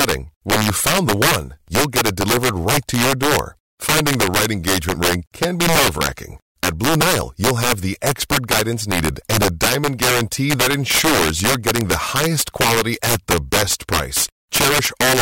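From start to finish this speech clip has integer overflow. The signal was pushed about 5 dB past full scale, and instead of being held at the ceiling, the peaks that went over wrapped around to the opposite extreme. Only a small share of samples, roughly three percent, cross that line, so it's the loudest moments that get hit: each one snaps into a harsh, violent crack that's far nastier and sharper than ordinary clipping.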